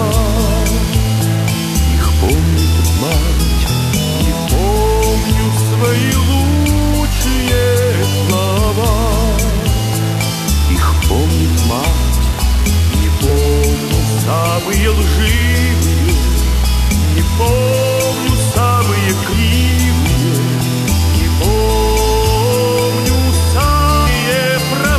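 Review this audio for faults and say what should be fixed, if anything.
The whole clip has a coarse, grainy distortion that moves with the sound. Quiet passages turn gritty, and the softest parts sputter between steps or drop out. This is the signature of low bit depth without dither. The grain sits only about 15 dB below the signal, which fits roughly 4 bits with plain rounding, so the error tracks the waveform instead of forming a steady hiss. Keep a 16- or 24-bit path throughout and apply dither at any final word-length reduction.

There are two short glitches, at 13.28 s and 24.06 s. These are damaged data in a compressed stream. Corrupted bytes make the decoder misread the affected frames, lose sync and jump ahead to the next valid frame header; the misread frames produce the glitch, and the jump leaves a gap in continuity. Protect the stream with checksummed transport and verified storage, and re-fetch or conceal frames that fail integrity checks.

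From 20.8 s to the end, a thin, steady whistle at 4.9 kHz sits about 20 dB below the main sound, swelling and fading slowly in level. It is likely a feedback whistle: the loudspeaker-to-microphone loop is held just at the edge of instability, so one frequency keeps ringing without building into a runaway howl. Reduce monitor gain, increase the distance between microphone and speaker, or notch out 4.9 kHz to restore loop stability.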